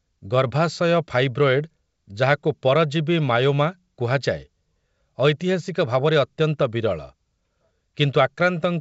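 Nothing is technically wrong with this speech recording, heard over G.722 wideband telephone coding.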